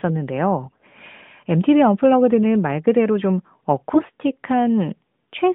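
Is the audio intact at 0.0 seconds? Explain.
Yes, the audio is intact at 0.0 s, with no fault at that moment.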